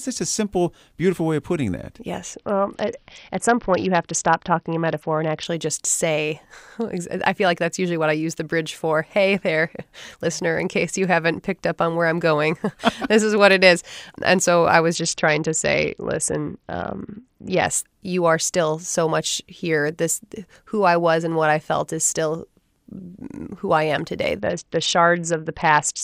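At 2.33 s, after "way of putting that", the speech turns dull and gritty until 5.45 s, before "just say". The same Bluetooth SBC bit pool drop recurs from 14.94 to 17.67 s, between "so I" and "you are still so", and from 24.40 s, after "who I am today", to the end. Starved of bits, the encoder abandons the upper sub-bands and coarsely quantises the rest, which fits a bit pool cut from 31 to 7, near 61 kbps. A spectrogram shows the treble abruptly emptied and granular noise smeared through the remaining bands.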